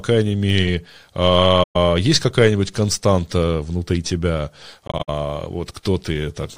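At 1.63 to 1.76 s the speech drops into a soft-edged gap of about 128 ms that fades out and back in. At 4.87 to 5.10 s the dropouts are scattered across about 213 ms, the longest run being around 70 ms. Both are AAC frame loss with muting. The decoder zeroed the missing frames' spectrum, and the overlapping windows smooth each edge. Each gap points to about six lost frames.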